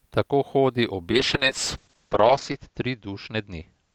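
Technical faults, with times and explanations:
1.12–3.94 s, call bitrate drop: the speech turns rough and muffled as high frequencies above 8 kHz vanish, consistent with the encoder being cut from roughly 48 kbps to about 7 kbps. It holds its coarsest for 1.45 s and doesn't recover before the clip ends.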